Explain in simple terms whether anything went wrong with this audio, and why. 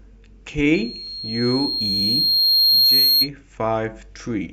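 Something did go wrong: loudspeaker feedback squeal from about 0.74 to 3.29 s. The microphone picked up its own loudspeaker, and one high pitch near 4.2 kHz kept looping and growing, swelling over roughly two seconds into a sharp whistle that sits well above the speech.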